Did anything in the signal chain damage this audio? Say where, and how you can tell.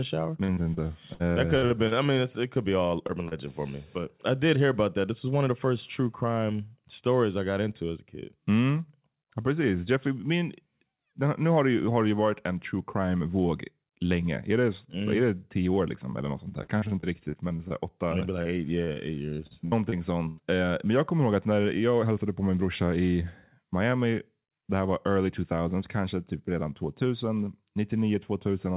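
Yes, the network stage did. Repeated packet loss (robotic sound) runs from 0.44 to 3.34 s and again from 16.49 to 20.41 s: 13 and then 17 gaps, the longest 58 ms and 94 ms, each patched by stretching the last sound. That's why it goes choppy, with pieces missing.

The jitter buffer then sped things up to shed backlog after bunched packets. From 4.58 to 6.86 s it plays about 3% fast, cutting around 70 ms. From 22.03 to 22.40 s it runs about 8% fast, trimming roughly 40 ms. Pitch stays put, so the later stretch sounds hurried.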